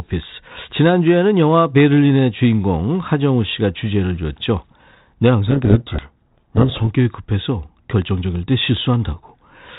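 Harsh, grinding distortion swamps the speech from 5.48 to 6.8 s, then clears. It is a codec payload misread: the two ends of this G.726 link disagreed on the bit order of the code words, so the decoder took each ADPCM difference value with its bits reversed and rebuilt the wrong waveform. Around that stretch the telephone-band speech carries only the faint hiss expected of G.726, which fits a 32 kbit/s stream.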